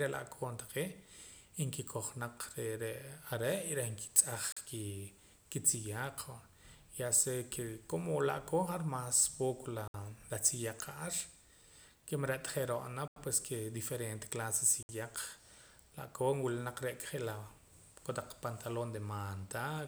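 At 4.52 s, after "y reh nkitz'aj", the speech drops into a block of digital silence for about 43 ms, which fits a 2048-sample buffer left unfilled in time. It recurs at 9.88 s for 64 ms, between "la'koon ja'ar mas poco" and "la tziyaq ja'ar"; at 13.08 s for 85 ms, fitting 4096 samples; and at 14.83 s for 64 ms, after "diferente clase". Each is heard as a short hole. The waveform shows flat, near-silent stretches with abrupt edges, and the spectrogram shows blank vertical gaps.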